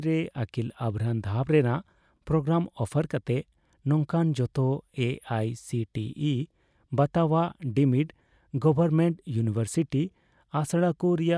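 No technical faults are audible.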